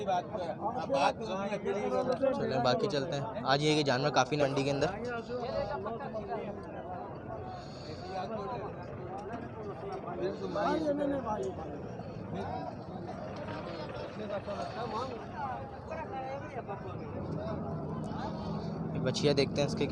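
At 4.41 to 4.43 s a skip ahead drops about 0.4 s of audio and splices the two sides together; the waveform shows an abrupt seam with no gap. From 4.59 to 5.49 s a jitter buffer speed-up trims tiny pitch-period slices, about 70 ms in all, so the sound runs 106% fast at unchanged pitch, with harmonics compressed in time on the spectrogram.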